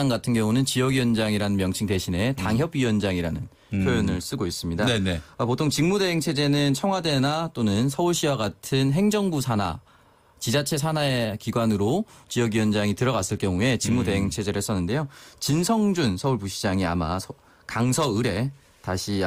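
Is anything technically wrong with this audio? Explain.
No, nothing stood out as technically wrong when listening to this audio.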